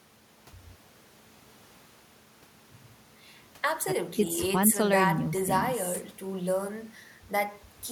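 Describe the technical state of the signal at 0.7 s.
At 0.7 s the speech signal is intact, with no dropout, clipping, glitch or other technical fault.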